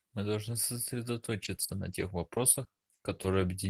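From 1.43 to 3.42 s, repeated packet loss (robotic sound): nine short dropouts, the longest 40 ms, are patched by extending the preceding sound. About a fifth of a second is rebuilt this way, making the speech choppy, with fragments missing.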